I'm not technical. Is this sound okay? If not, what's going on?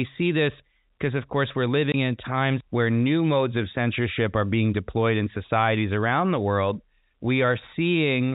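No. At 1.92 s, between "because of course we're" and "in times where new", there's packet loss filled with silence: one 20 ms piece went missing, leaving a brief gap.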